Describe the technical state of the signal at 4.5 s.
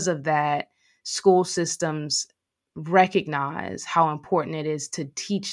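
At 4.5 s the speech signal is intact, with no audible fault at that moment.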